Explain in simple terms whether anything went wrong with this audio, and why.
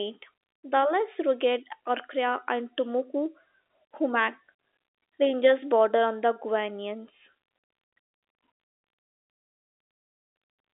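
Nothing went wrong here: the speech has the narrow, boxy sound of ordinary fixed-line telephone coding, which passes only the middle of the sound range and carries nothing above about 3.8 kHz, exactly as a normal phone line should.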